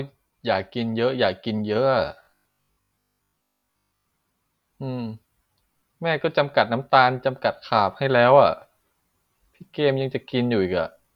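From 2.23 to 4.05 s, audio likely arrived too seldom, so buffers replayed over most of it: robotic repeated-buffer sound, a rigid 50 Hz buzz.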